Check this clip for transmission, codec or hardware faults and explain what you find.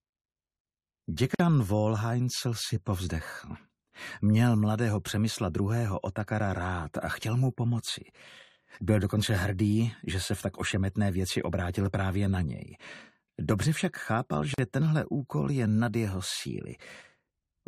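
Two short dropouts occur, both the same fault: a gap at a join of encoded pieces. The first runs from 1.35 to 1.40 s and lasts about 50 ms. The second runs from 14.54 to 14.58 s and lasts 43 ms. The audio was encoded in separate pieces and joined untrimmed. Each piece kept its encoder's start-up silence and end padding. The sound stops abruptly, with softened edges, then resumes exactly where it left off.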